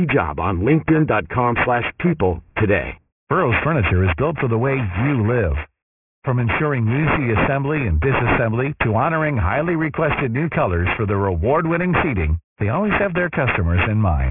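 Speech, with aliasing throughout. Sibilants turn gritty and metallic, and the spectrum runs hard up to 3 kHz, which fits an unfiltered drop to a 6 kHz rate. Folded energy sits only about 5 dB below the speech.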